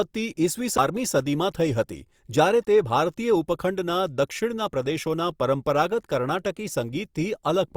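At 0.77 s there is a CD skip. A knock or a flaw in the disc threw the laser onto another turn of the spiral, so the player muted for only about 10 ms and then picked up the speech from a different point. It is heard as a small tick followed by a discontinuity in the speech. Unlike a plain dropout, where the sound comes back after the gap with its timing unchanged, here the speech does not resume where it was cut off.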